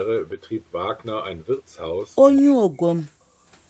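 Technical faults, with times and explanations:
2.36 to 2.41 s, echo leak: A faint, delayed copy of the speech slips through briefly, about 25 dB below it and trailing by about 200 ms. The far side's echo canceller likely missed part of its loudspeaker pickup and sent it back.
2.39 to 2.89 s and 3.07 to 3.21 s, speech suppressed in double talk: The speech drops sharply, by around 40 dB at its deepest. Both sides likely talked at once, so the echo canceller turned the talker down along with the echo.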